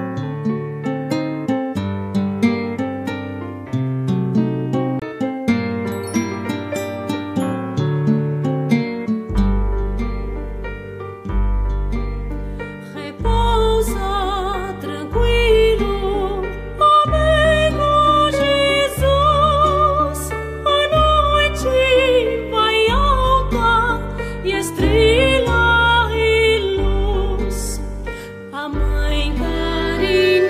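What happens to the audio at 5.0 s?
A CD skip occurs from 4.99 to 5.02 s: the laser loses its track and lands on another turn of the disc's spiral, so playback resumes from a different point. The player mutes briefly, for about 30 ms, and the sound is heard as a short tick or gap, then an abrupt discontinuity where the audio carries on from a displaced position instead of continuing smoothly.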